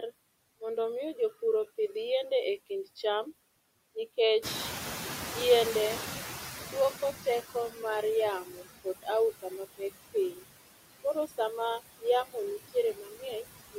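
A speech recording carrying noise suppressor artifacts throughout: the suppressor pulls down bands it judges to be steady noise by about 17 dB, so the background dips between phrases and swells beneath them. Around 4.5 s the room noise jumps by roughly 15 dB, and from 4.42 to 7.73 s the noise suppressor is catching up: its noise estimate lags, letting the louder background through before it settles to about 14 dB of reduction over roughly 3.3 s. Later there is speech cut by the noise suppressor at 8.45–9.08, 9.42–9.81, 10.14–10.44, 11.04–11.39, 12.0–12.36 and 12.68–13.77 s. Here quiet parts of the speech are mistaken for noise and dropped by about 10 to 20 dB, so brief stretches, from a tenth of a second up to about 0.4 s each, sound swallowed or faint.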